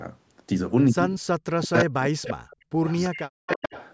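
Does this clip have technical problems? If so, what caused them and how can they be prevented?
Yes. The speech is suppressed in double talk at 1.53–2.04, 2.35–2.59, 2.75–2.86 and 3.10–3.73 s. It dips by up to about 40 dB or cuts out. The likely cause is an echo canceller that could not separate this talker from the loudspeaker echo while both sides spoke, so it turned everything down. A canceller with better double-talk detection, or a headset, would prevent this.

There is also an echo leak at 1.62–1.85, 2.23–2.34, 2.86–3.22 and 3.48–3.88 s. A copy of the speech returns 344 ms later, about 10 dB below it (about 20 dB at 2.86 s). It likely comes from a loudspeaker on the far side whose canceller did not remove all the echo. Using headphones there, or a better-tuned canceller, would prevent it.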